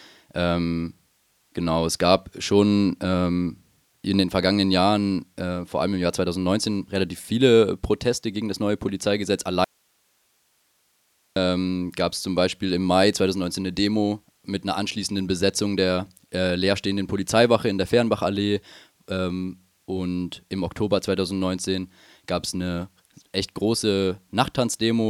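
At 9.64 s the speech cuts out abruptly and stays gone until 11.36 s, about 1.72 s, returning mid-flow on "gab es zum". This is an audio dropout to a faint residue: the gap holds only hiss, roughly 45 dB below the speech, so the chain after the break likely stayed live while the signal feeding it was lost. Unlike a natural pause or a fade, the edges are instant, and unlike a hard dropout the gap is not dead silence.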